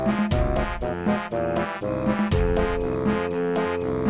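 No technical faults can be heard anywhere in the audio.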